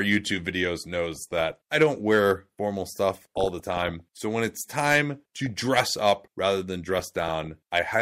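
DAB burbling breaks through the speech at 1.12–1.53 s, 3.14–4.01 s, 5.37–5.54 s and 6.92–7.47 s. Bit errors, roughly 0.4 percent to one percent, slip past error correction and corrupt the MP2 data, giving short blips of noise in single sub-bands. A spectrogram shows isolated sub-band blocks flaring frame by frame.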